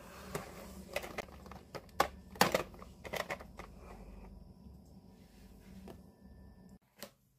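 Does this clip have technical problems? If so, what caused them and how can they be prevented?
Yes. A short garbled blip breaks the sound from 1.19 to 1.24 s, caused by damaged data in a compressed stream: corrupted bytes made the decoder misread those frames and lose sync until it found the next valid frame header. Checksummed transfer and error-protected storage would prevent it.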